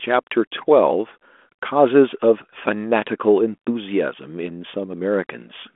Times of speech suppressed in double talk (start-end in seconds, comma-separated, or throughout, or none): none